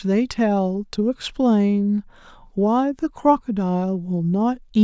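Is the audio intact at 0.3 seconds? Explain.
Yes, the speech at 0.3 seconds plays through intact, with no dropout, click, distortion or other fault at that moment.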